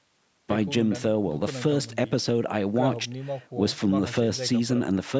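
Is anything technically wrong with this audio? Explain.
No, nothing stood out on listening to this speech recording, which has come through a call's microphone processing.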